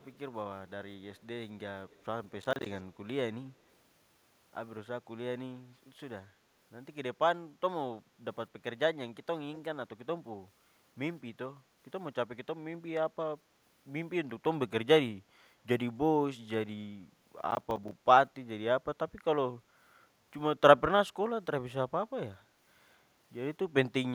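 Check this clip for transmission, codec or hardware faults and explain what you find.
Two kinds of fault are present: faint echo leak near the start and two bursts of processor overload crackle.

Echo leak appears at 0.00–0.18 s, 1.15–1.20 s and 1.89–2.05 s: a delayed copy of the speech trailing it by 212 ms, very quiet at about 35 to 40 dB below the speech. The likely cause is a far end playing the call on a loudspeaker whose echo canceller failed to remove everything its microphone picked up, so that residue was sent back. The copy comes through only in brief scraps.

Processor overload crackle occurs at 2.41–2.66 s and 17.24–18.04 s. Here the processor could not finish each small audio buffer in time, and it missed a string of deadlines. Each missed buffer left a hard-edged gap of silence, which fits buffers of around 10 ms, with a dozen or more misses in each burst. Together the gaps sound like a gritty, tearing crackle riding on the speech, and it stops once the load eases.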